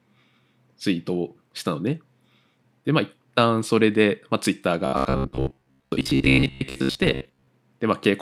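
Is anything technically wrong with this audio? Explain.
Yes. From 4.86 to 7.48 s the speech goes robotic, a stiff metallic buzz at 66.8 Hz that only loosely follows the words. That's likely robotic sound from repeated short buffers: a starved stream looping roughly 15 ms chunks and skipping most of the real audio.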